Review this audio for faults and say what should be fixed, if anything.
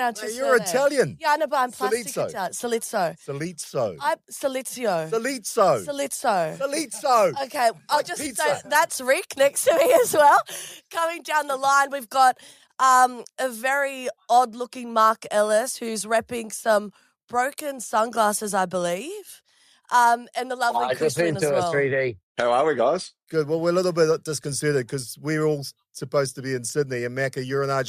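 Nothing here needs fixing, since there are no dropouts, distortion or interruptions anywhere in the clip.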